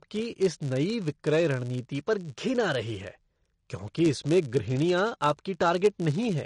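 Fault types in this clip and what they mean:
filter restarted on every block: The filter's memory is wiped at each block boundary, so every block starts from silence with a small transient. Here that gives a 100 Hz buzz that rises and falls with the speech level. The waveform shows spikes every 10 ms, and the spectrogram shows evenly spaced vertical lines or a 100 Hz harmonic comb.
MP3 compression: The speech sounds plainly watery and swirly, with smeared consonant onsets and nothing above 10.6 kHz, likely from MP3 encoding at a low bitrate, which fits about 48 kbps. The spectrogram shows a hard ceiling at 10.6 kHz, with patchy gaps that flicker from frame to frame below it.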